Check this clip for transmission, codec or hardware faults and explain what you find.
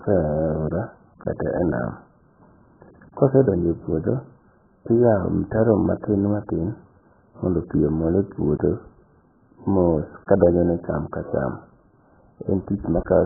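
One fault runs through the whole recording: heavy AAC compression damage, present from start to finish of the speech. The sound is dull and boxed-in because nothing survives above 1.8 kHz, which fits an AAC-LC encoder likely starved at a very low bitrate in the region of 8 kbps. With so few bits for each frame, the encoder pulls its cut-off far down and zeroes or coarsely approximates many frequency lines. Consonants and sibilants lose their edge and smear, and sustained vowels take on a warbling, watery texture.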